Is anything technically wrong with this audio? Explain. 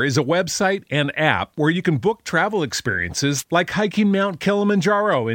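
Yes. From 3.35 to 3.44 s, just before "like hiking", a brief swish of static breaks through the speech. This is a wireless microphone noise hit: the FM radio link faded as reflected signals cancelled, so receiver noise surged for about 90 ms.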